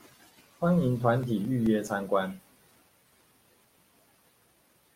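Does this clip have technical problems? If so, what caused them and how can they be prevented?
Yes. Between 1.23 s and 2.31 s this speech clip carries CD scratch ticks: six short clicks, the longest only a few milliseconds, at a steady rate of roughly five or six per second. A scratch or blemish on the disc corrupts more data than error correction can recover on each rotation, so the player interpolates across or mutes those samples. Prevent it by ripping from a clean, undamaged disc with a secure-mode ripper that re-reads and verifies every sector.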